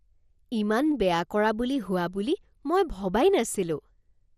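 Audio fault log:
throughout: MP2 compression. The speech sounds dull and carries a plainly audible gurgling, granular grain, with nothing above 14.2 kHz. The likely cause is MPEG Layer II coding starved of bits, fitting a 64 kbps rate, which shuts off upper sub-bands and coarsely quantises the rest.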